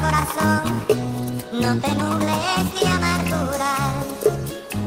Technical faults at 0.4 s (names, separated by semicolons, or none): none